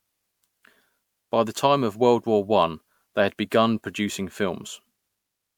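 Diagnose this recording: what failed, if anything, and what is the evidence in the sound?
Throughout the speech, a swirly, hollow smear with blurred attacks points to codec generation loss, likely from about five successive MP3 encodes at 128 kbit/s.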